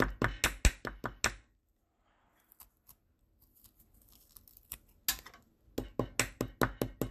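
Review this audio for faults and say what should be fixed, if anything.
The whole clip has a dull, gurgling graininess, and nothing comes through above about 14.7 kHz. That's likely MP2 compression: the encoder splits the audio into 32 sub-bands and shares out a fixed bit budget, so the top bands get dropped entirely and the rest are quantised coarsely. The granular churn is plainly audible here, which fits a low rate of around 80 kbps. To avoid it, work from an uncompressed or higher-bitrate source.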